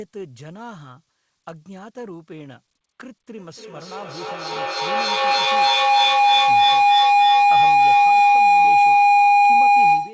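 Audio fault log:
3.38–10.13 s, feedback howl: a second device in the same room is on the call, and each trip from loudspeaker back into microphone returns more level than it started with, so the repeats grow rather than decay. They converge on a tone near 700 Hz, with the loop's round-trip delay roughly 300 ms, and peak about 21 dB above the speech. The tone sits inside the call path's band, which stops at 8 kHz, consistent with a G.722 wideband codec.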